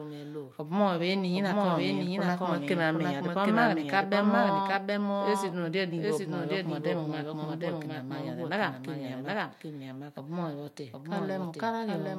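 All the way through, there's a doubled audio track: a second copy of the speech trails by roughly 0.7 s, about 5 dB quieter, likely captured twice.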